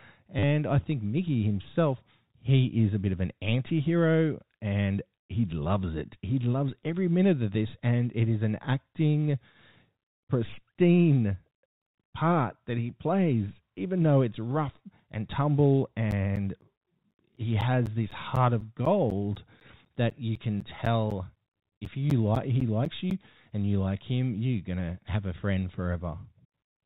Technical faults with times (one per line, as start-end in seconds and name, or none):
0.39-0.43 packet loss with last packet repeated
16.11-23.11 periodic USB or driver dropouts